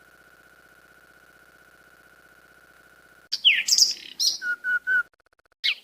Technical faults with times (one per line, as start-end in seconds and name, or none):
none